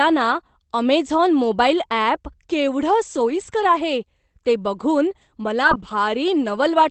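At 3.15 to 3.73 s, after "अमेझॉन मोबाईल अॅप केवढं", and at 5.63 to 5.93 s, after "ते बघून", there is a lost packet rebuilt from error correction. Low-bitrate copies filled the lost packets. No gap, but the sound turns rougher and noisier.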